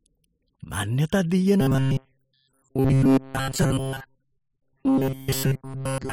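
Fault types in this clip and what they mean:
Robotic sound from repeated short buffers: from 1.61 s on, the speech becomes a rigid metallic buzz at 134 Hz, likely from a 7.5 ms buffer repeated while most real audio is skipped.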